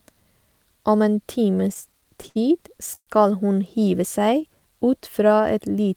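From 1.55 to 2.37 s the speech falls into repeated stalls (stutter). Eleven short gaps are each bridged by extending the last sound, adding 158 ms in total, with the longest hold at 64 ms, about a fifth of that stretch. Packets were arriving later or slower than playback, so the jitter buffer kept running dry. Nothing is lost, but the delivery jerks. On a spectrogram, short flat, smeared bands break up the normal formant movement.

At 2.95 s a call audio freeze lasts until 3.09 s. The last sound is held for 117 ms and fades, with about 50 ms of it near silence, before the speech resumes exactly where it stopped. The likely cause is packets held up in transit that emptied the jitter buffer, pushing the delay back by 117 ms. The waveform shows a decaying tail into a flat gap. The spectrogram shows a frozen, fading band and then a blank strip.

From 4.19 to 5.42 s a jitter buffer slow-down stretches the speech to 90% speed, adding 124 ms. 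To rebuild its reserve, the receiver repeated single pitch periods and slivers of pauses many times in a row. The pitch stays the same while sounds are drawn out. On the waveform the same cycle shapes repeat back to back. On the spectrogram the harmonics keep their spacing but run longer horizontally.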